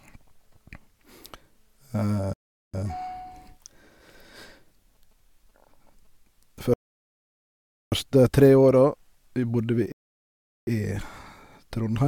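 Speech with three rebuffering stalls, at 2.33–2.74 s, 6.74–7.92 s and 9.92–10.67 s, adding 0.4, 1.18 and 0.75 s of silence. The player ran short of downloaded audio. Unlike a dropout, each stall resumes exactly where it stopped, losing nothing.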